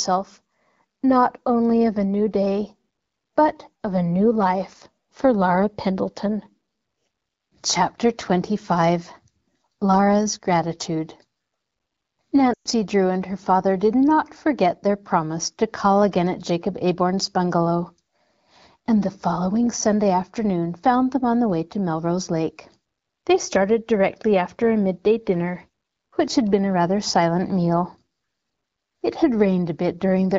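Speech over an AMR wideband (HD Voice) link has lost AMR speech frames from 12.53 to 12.68 s: concealment drops the sound to near silence within two frames, and the loss spans about 120 ms, which fits six 20 ms frames.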